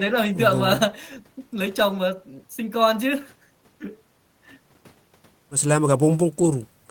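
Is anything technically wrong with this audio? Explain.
No, the recording carries no audible technical faults anywhere in its duration.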